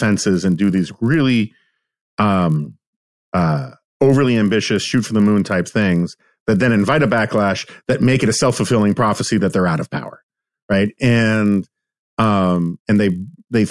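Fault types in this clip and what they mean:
Resampler restarted on every block: the 48 kHz to 24 kHz conversion seems to have been run on each block in isolation, so the filter at every block boundary worked from missing or wrong neighbouring samples instead of the true continuation. With 20 ms blocks, those edge errors recur 50 times a second and merge into a steady buzz at 50 Hz that rides on the speech throughout the clip and drops away when the signal does.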